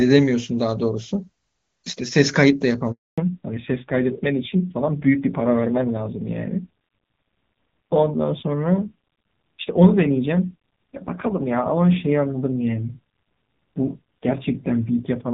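At 2.92 s the speech cuts out in a handover gap. The call switched networks and no speech frames arrived for 260 ms. The sound fades within a few tens of milliseconds and stays silent until 3.18 s, when the new link starts.

From 3.18 s to the end comes a fallback to narrowband. Before the gap, the HD Voice link carried clear wideband speech. After it, nothing remains above 4 kHz. The speech turns dull and rough, which fits a low-rate narrowband codec near 5.9 kbit/s.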